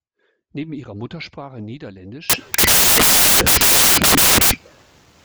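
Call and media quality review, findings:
Samples built from the wrong bytes, 2.30 s to end: loud broadband white noise replacing speech. Sample reader misassembling bytes (offset, swapped order or misalignment). Spectrogram shows flat full-band fill.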